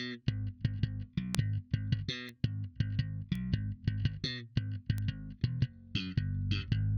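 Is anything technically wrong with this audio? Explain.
Yes. Bit error spikes occur at 1.35, 2.29, 3.35 and 4.98 s. A flipped bit in memory or on a digital link throws a sample, or a few in a row at 1.35 s, off by a power of two before it snaps back. Each is a sharp broadband tick unrelated to the surrounding sound, peaking at about -8, -27, -27 and -20 dBFS.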